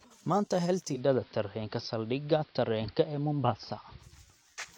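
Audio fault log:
0.91 to 4.09 s, digital radio blending to analogue: the receiver drops its digital stream and cross-fades over about 110 ms to the station's AM broadcast, then comes back the same way at the end. A faint hiss sits roughly 35 dB under the signal, and the level shifts by about 2 dB at the switch.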